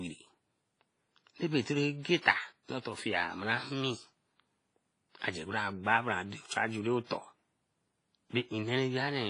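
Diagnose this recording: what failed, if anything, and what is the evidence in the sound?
WMA compression, heard across the whole speech clip: the codec stage failed. The sound is ringing and washy, with a hiss that swells and falls with the signal, and nothing is present above about 10.5 kHz. This is likely a transform codec run at a low bitrate, which fits something near 24 kbps. Heavy quantisation smears noise over tens of milliseconds around each block, weak spectral lines are zeroed, and the top band is discarded entirely.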